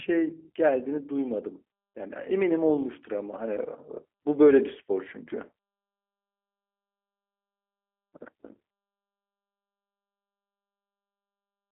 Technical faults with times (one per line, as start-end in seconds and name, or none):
0.00-11.72 G.729 codec